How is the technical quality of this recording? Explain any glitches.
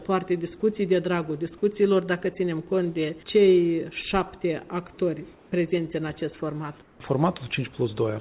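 The recording has two brief glitches, both comfort noise in place of the background, heard through a call path whose codec leaves nothing above 4 kHz. From 5.34 to 5.52 s and from 6.82 to 7.0 s, the sender likely paused transmission during quiet moments and the receiver filled each 180 ms gap with synthetic noise. The real background, roughly 31 to 33 dB below the loud parts, briefly becomes flat, featureless hiss about 1 to 2 dB quieter.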